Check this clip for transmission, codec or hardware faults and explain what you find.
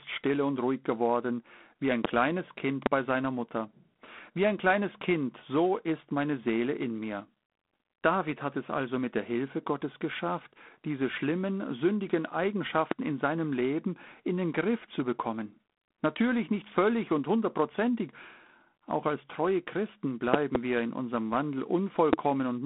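Two faults are present: a codec hiss across the whole speech clip, and several loud pops.

G.726 ADPCM runs throughout: a harsh, rasping hiss rides on the speech and rises with its level, and nothing above 3.9 kHz survives. At 24 kbit/s each sample keeps only about 3 bits of the error against an adaptive prediction, so that error is coarsely quantised.

Loud pops occur at 2.05 to 2.07 s, after "ruhig geworden wie ein"; 2.86 to 2.89 s, after "geworden wie ein kleines", before "bei seiner"; 12.91 to 12.94 s; 20.34 to 20.58 s, a double pop just before "wir in unserem"; and 22.13 to 22.16 s. Each is a sharp crack roughly 20 dB above the speech, the last two nearer 25 dB. The likely cause is a voltage step or spike, from a plug, switch, static or driver glitch, added on top while the speech continues underneath.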